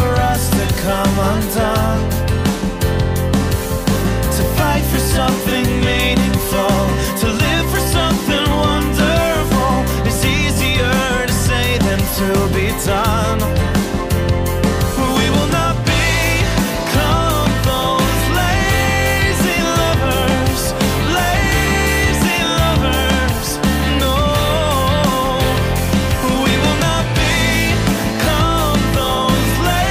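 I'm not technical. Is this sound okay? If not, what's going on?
Yes, nothing wrong here.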